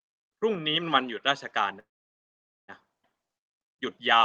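At 1.79 s the speech stops for about 0.9 s, until 2.70 s. This is a call audio freeze, likely caused by packets held up in transit so the jitter buffer ran dry. The receiver stretches the last sound only briefly before it falls to near silence for about 0.84 s. When speech resumes it picks up exactly where it left off. Nothing is lost, which separates a freeze from a dropout: the timeline is pushed later rather than cut.

At 3.02 to 3.05 s comes the opposite event, a skip ahead. Roughly half a second of speech never plays, and the two sides are joined almost directly, with only a tiny fill of about 12 ms. It sounds like an abrupt jump forward in the sentence, not a pause. That abrupt jump is what distinguishes it from the freeze: here the delay built up earlier is shed by discarding audio. The call codec path itself, band-limited to about 12 kHz, carries the sound around both events.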